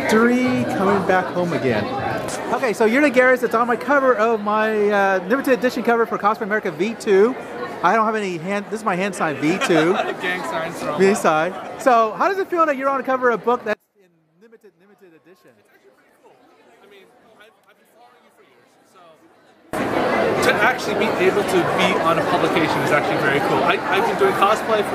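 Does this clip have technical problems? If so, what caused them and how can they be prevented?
Yes. From 13.73 to 19.73 s the sound collapses to a faint trace, roughly 31 dB quieter than before, with nearly all of it gone, then returns intact. This is most likely one channel inverted: with one side's polarity reversed, the material common to both channels cancels when they are summed to mono, leaving only their small difference. Checking polarity and mono compatibility on every segment before export prevents this.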